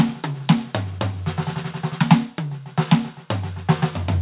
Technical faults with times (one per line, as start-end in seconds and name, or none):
0.00-4.21 aliasing